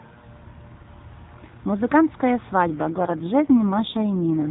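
Speech over an AMR narrowband mobile link: from 2.70 s to the end, an AMR rate drop makes the voice rougher and more synthetic, with no gap or band change, consistent with the codec stepping down from 12.2 to 4.75 kbps.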